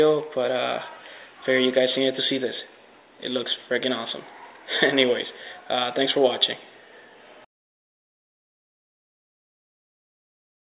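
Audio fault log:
Nothing stood out on listening; no faults were heard anywhere in the audio.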